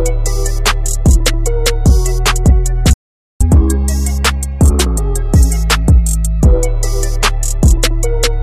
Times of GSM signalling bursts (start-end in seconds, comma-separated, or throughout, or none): none